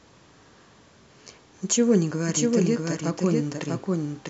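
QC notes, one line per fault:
2.28 s to end, doubled audio track: a second full-band copy of the speech enters abruptly and trails the original by about 0.7 s, some 5 dB quieter, likely from a slower capture path. Unlike an echo, it never decays and adds no room colour.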